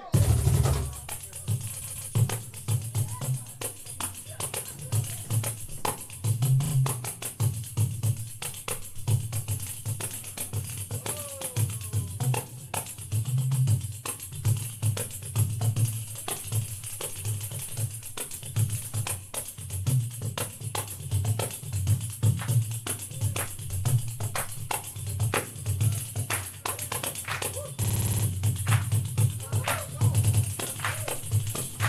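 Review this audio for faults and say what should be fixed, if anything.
Repeated frames at 1.81–2.09, 6.64–6.72, 27.83–28.24 and 30.23–30.43 s: a short compressed block replays, so the same fraction of a second is heard again as a stutter. Unlike a dropout, nothing goes missing; instead the audio runs longer. To prevent it, deduplicate frames by sequence number before decoding.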